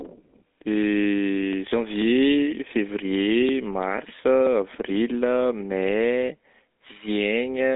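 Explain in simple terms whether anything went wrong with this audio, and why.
The speech sounds buzzy, gravelly and muffled from start to finish, because it passed through the GSM full-rate codec, an old phone coder that discards everything above about 3.8 kHz.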